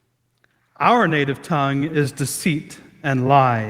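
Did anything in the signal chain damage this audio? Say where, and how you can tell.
Yes. From 0.84 s to the end at 3.69 s, the speech and the background noise swell together, which points to automatic gain rising in the call processing stage. The AGC judged the input too quiet and kept raising its gain gradually, lifting everything at once.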